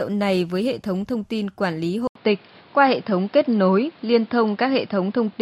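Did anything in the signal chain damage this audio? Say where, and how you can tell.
Yes. At 2.07 s, after "thông tin quản lý", an 80 ms gap, a level jump and a new noise floor suggest the input likely switched to a poorer device; the spectrogram shows nothing above 5.3 kHz from there on.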